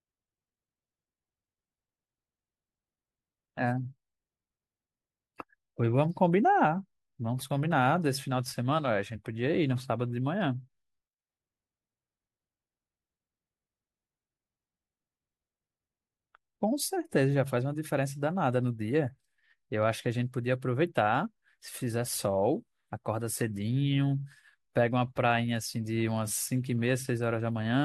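No technical faults can be heard anywhere in the speech. There is no event to place in time and nothing that points to a problem in the signal chain.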